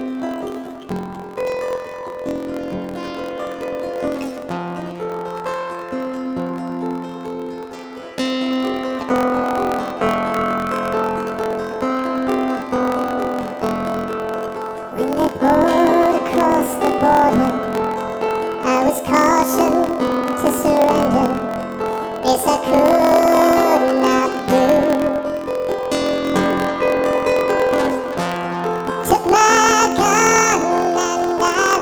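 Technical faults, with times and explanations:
Throughout, planar audio read as interleaved: each block of 1024 samples, about 23.22 ms, stores all left samples and then all right, but the reader treats it as alternating left-right pairs. Each channel's half-block therefore plays at double speed, left then right, keeping the overall pace. The sound is raised 12 semitones, a full octave, with a fluttering roughness repeating at 43.1 Hz, the block rate, which fits a 1024-sample block.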